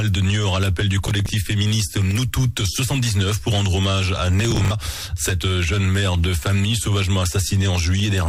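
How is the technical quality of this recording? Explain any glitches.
The recording has two bursts of processor overload crackle, from 1.07 to 1.29 s and from 4.40 to 4.71 s. The processor fell behind and missed a run of short buffers, around 10 ms each, reusing stale audio with hard edges. This adds a gritty, tearing crackle, with the second burst longer and denser.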